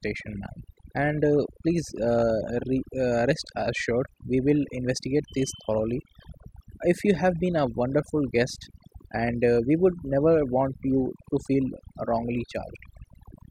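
Overdone noise removal runs through the whole speech clip. A noise reduction stage was pushed too hard. Wherever a frequency band sits close to its estimate of the noise floor, it pulls that band far down or cuts it outright. The gaps between phrases drop to near silence, scattered with twinkling specks. Quieter parts of the voice get caught as well.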